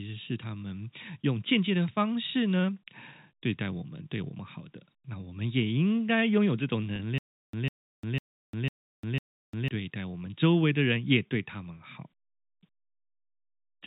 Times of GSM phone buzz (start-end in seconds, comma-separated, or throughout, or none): none